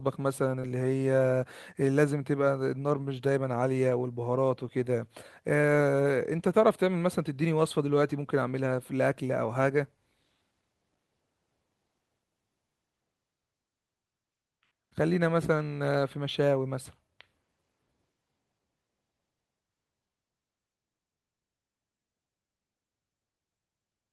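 At 0.59 s, about 50 ms into 0.65 s, the speech has a short concealed packet loss. Around 40 ms of audio never reached the decoder in time, and the receiver covered roughly 31 ms of that gap by extending the preceding sound before blending back into the real signal. The result is a brief smear or wobble rather than silence, which separates it from a plain dropout, where the sound would cut to nothing, and from a click.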